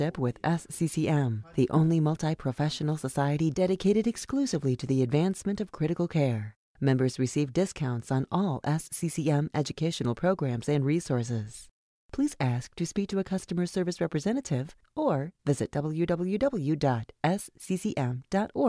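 No technical faults are audible.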